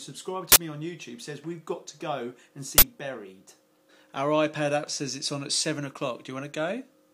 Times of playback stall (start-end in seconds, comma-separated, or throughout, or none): none